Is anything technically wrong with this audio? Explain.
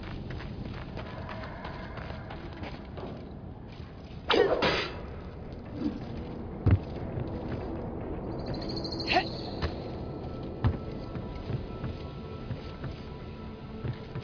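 No, nothing here stands out as a technical problem, so there's really nothing to flag in this one.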